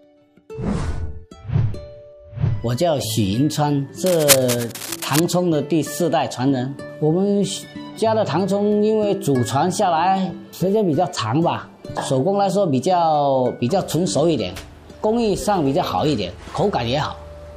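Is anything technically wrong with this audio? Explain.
Yes. From 4.06 to 5.21 s there is cable scratch noise. Dense, uneven bursts of scratching and rustling sit over the sound, only a little quieter than it. The likely cause is a worn cable, connector or control being moved, so its contact resistance flickers rapidly.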